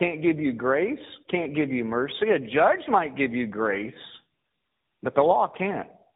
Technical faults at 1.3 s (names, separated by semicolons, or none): tandem speech coding